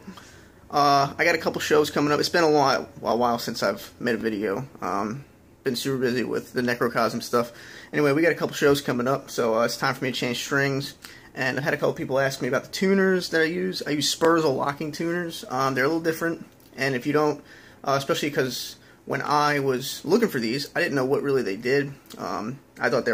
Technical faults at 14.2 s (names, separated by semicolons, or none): overlapping chunks